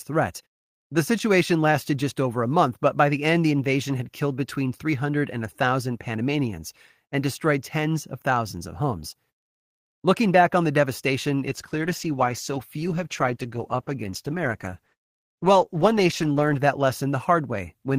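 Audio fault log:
11.49 to 16.69 s, call bitrate drop. Right after "back on the devastation", the speech turns rough and muffled for about 5 s. The encoder is coding it with far fewer bits and dropping the highs. This fits a fall from about 32 to 15 kbps.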